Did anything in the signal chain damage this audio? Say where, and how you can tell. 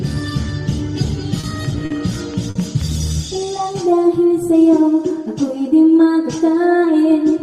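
Yes. The network side hit three short stalls from a late packet, at 1.40 s, 1.85 s and 2.50 s. The jitter buffer ran dry and the receiver held the last sound for 30, 50 and 50 ms. You hear a brief drawn-out bit, but nothing goes missing.

There's also a train of clicks from 1.65 to 2.82 s, about seven evenly spaced ticks at roughly 4.7 per second, sitting at about signal level. That steady pulse points to likely interference or a struggling interface in the analogue or converter stage.

From 3.13 to 3.64 s you can hear a jitter buffer slow-down. The receiver repeated tiny pitch-period chunks to rebuild its reserve, adding 47 ms. The audio plays at 92% speed with the pitch unchanged, so it sounds slightly stretched.

Then a jitter buffer speed-up runs from 5.67 to 6.07 s. Here the buffer had too much queued, so it trimmed short pieces, roughly 40 ms in all. That pushes playback to 109% speed at the same pitch, and it comes across as a little hurried.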